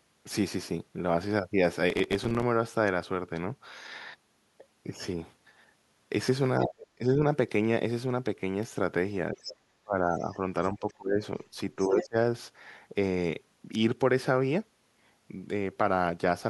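A speech recording with three kinds of fault. From 1.90 to 2.43 s there is processor overload crackle. Dozens of tiny silent gaps tear the sound into grit. That fits very short buffers, around 3 ms each, missing their deadlines while the processor was swamped. The talker's speech dips sharply at 6.65–7.19, 9.32–10.39, 10.74–11.21 and 11.76–12.16 s. It sometimes falls by roughly 35 dB. This is likely speech suppressed in double talk, with the echo canceller turning the talker down while the far end spoke. Faint scraps of a second voice appear at 9.42–9.53, 10.19–10.32, 10.63–10.94 and 11.81–12.03 s, well below the main speech. That is likely the other side's voice leaking through, loudspeaker echo the canceller failed to remove.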